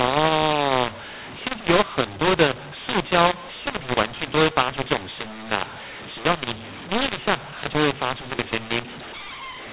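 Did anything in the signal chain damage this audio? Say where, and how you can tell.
Yes. The damage is at the codec stage, a mu-law and A-law mix-up present for the whole clip. The speech was encoded as G.711 A-law but decoded as mu-law, so each 8-bit code maps to the wrong amplitude. Loud and soft samples come out at scrambled levels, giving a harsh, gritty distortion on every syllable. The near-silent codes are pushed well above zero, which is why the pauses fill with noise. The underlying 8 kHz telephone coding, with its narrow band, is intact.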